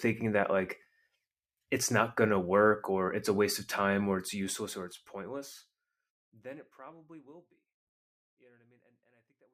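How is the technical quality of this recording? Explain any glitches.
No glitches are audible anywhere in this speech recording.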